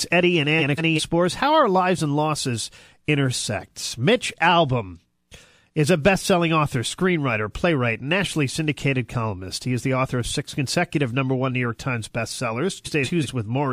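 A garbled flutter is heard from 0.59 to 1.00 s and again from 12.85 to 13.26 s. Both are frames out of order: two adjacent blocks of about 186 ms each, which fits runs of four frames, were swapped and decoded in that order, so each stretch plays its halves reversed without losing any time.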